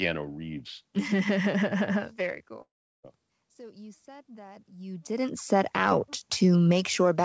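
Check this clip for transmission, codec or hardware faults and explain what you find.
Two faults can be heard: a dropout and a slow gain rise.

From 2.62 s to 3.05 s there is a break in the speech, most likely a long network dropout. No audio arrived for about 0.42 s. The receiver carried the last sound on as a fading buzz or hiss. For roughly 0.36 s of the gap only silence is left. When the speech resumes, the lost stretch is simply gone. Nothing is replayed to fill it.

From 3.57 s to 5.79 s the level swells slowly. This is automatic gain rising. The input had dropped by about 22 dB. The gain control heard a quiet signal and raised its gain by about 5 dB over some two seconds. Speech and room noise grow louder together. The rise is gradual, not a sudden step. The G.722 call path shows nothing above 8 kHz.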